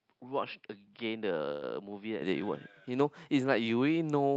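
Speech clip, and the first 2.22 seconds sound like they came through a different microphone: nothing above 5.3 kHz, so it's dull and boxy, it sits about 5 dB quieter, and there's a faint bed of noise well under the voice, roughly 50 dB down. At 2.22 s it opens up to the fuller sound with no gap at the switch, which is what you'd hear if the input switched to a poorer device and then back. Inside that stretch, from 1.51 to 1.64 s, there's a call audio freeze: the last bit of sound gets stretched into a fading buzz for about 110 ms, then the speech carries on from exactly where it stopped. Nothing's lost, but everything after it lands 110 ms later. That pattern points to late packets draining the jitter buffer.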